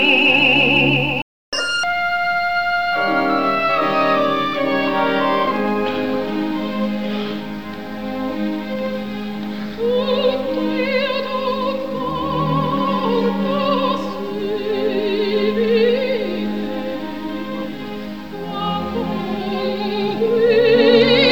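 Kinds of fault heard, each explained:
Playback stall: the sound drops out at 1.22 s for about 307 ms, likely because the player ran dry or got blocked, then resumes.
Catch-up at higher speed: from 1.53 to 1.84 s it runs at double speed to recover the gap, pitch jumping roughly ten semitones before settling back.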